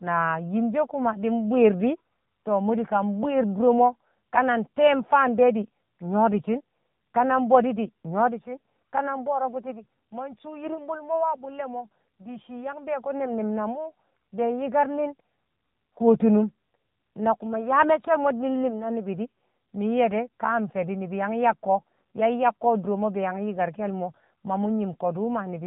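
Throughout, the speech carries AMR narrowband mobile codec damage: nothing above 4 kHz, and a plainly buzzy, synthetic vocal-tract rendering, which fits a low bitrate around 7.4 kbps.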